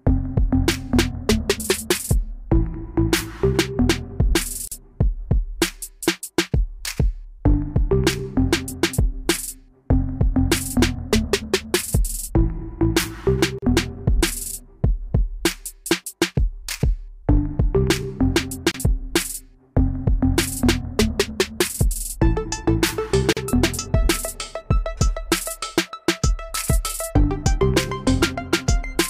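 At 4.68 to 4.72 s, 13.59 to 13.62 s, 18.71 to 18.74 s and 23.33 to 23.37 s, a gap at a join of encoded pieces cuts the sound for about 30 to 40 ms. Separately encoded segments were butted together with their encoder start delay and final-frame padding left in, so brief dropouts open and the sound resumes where it stopped. The waveform shows near-flat stretches with softened edges, and the spectrogram shows thin vertical blank stripes.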